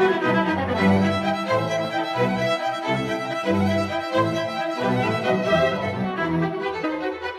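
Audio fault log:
0.72 s, 3.32 s, 6.83 s: compressed frames skipped. Whole coded frames were dropped or rejected by the decoder, so the music jumps ahead, by around 150 ms at 0.72 s and around 70 ms at the other two, which fits blocks of 23.2 ms frames. Overlapping neighbouring frames smear each join into a brief blip.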